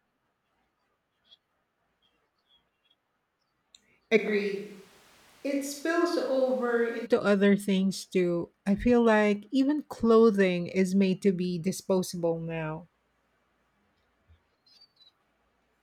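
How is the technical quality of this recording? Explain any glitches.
The recording has one clear glitch, a switch to a distant microphone between 4.19 s and 7.05 s. The close microphone's signal likely dropped out, leaving a pickup further from the talker. The speech suddenly turns roomy and hollow, with thinner bass, and falls by about 5 dB. Room noise sits only about 30 dB below the speech, so more background comes through. At 7.05 s the close, fuller sound snaps back just as abruptly.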